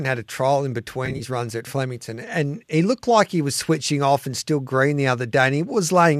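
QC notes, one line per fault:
1.06–1.22 s, AAC frame loss with concealment: between "had a trial in" and "runs at", about 80 ms of audio is missing in short gaps scattered across roughly 140 ms, with no gap much longer than 30 ms. That pattern fits several dropped 10 ms frames. The decoder patches each hole from the last good spectrum with randomised phase, so the passage sounds smeared and noisy and phasey rather than silent. The light coding damage of the surrounding sound likely comes from low-delay AAC compression.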